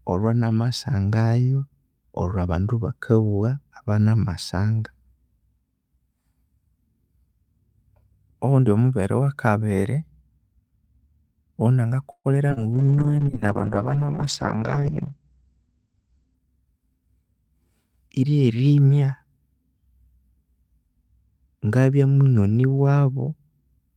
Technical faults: call audio freeze; skip ahead; short concealed packet loss; call bitrate drop; jitter buffer slow-down; jitter buffer speed-up

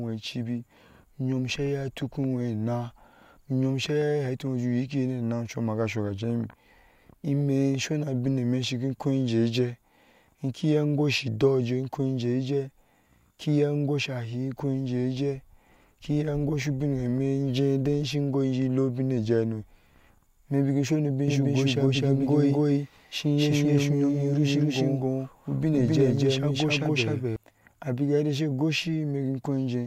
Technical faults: doubled audio track

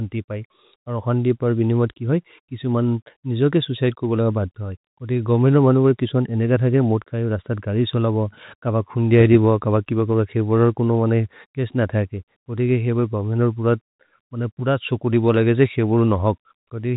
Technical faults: none

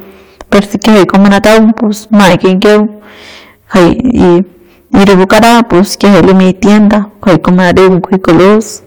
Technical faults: hard clipping

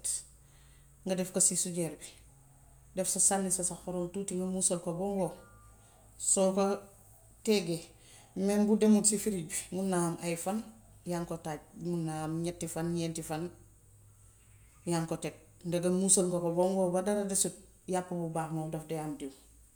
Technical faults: none

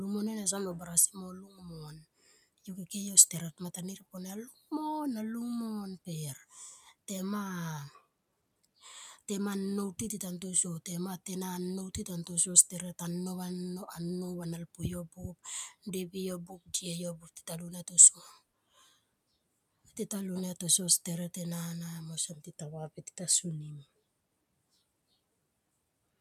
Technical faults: speech cut by the noise suppressor

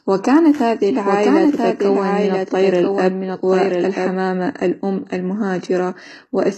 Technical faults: HE-AAC compression; doubled audio track

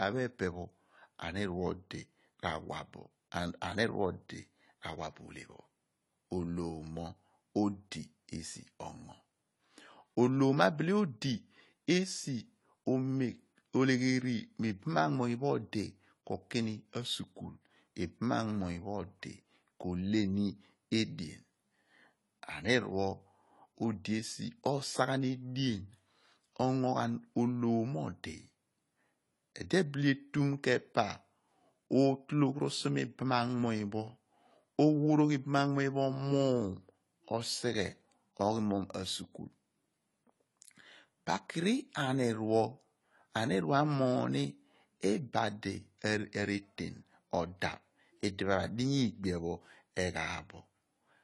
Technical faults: AAC compression

